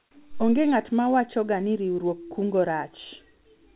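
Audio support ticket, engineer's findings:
Comfort noise in place of the background, 0 to 0.11 s. Opening background is a flat, featureless hiss, about 16 dB off the real room level, until the sound kicks in. Likely discontinuous transmission: sender went quiet and the receiver synthesised filler noise. Band stops at 4 kHz, consistent with G.711 narrowband.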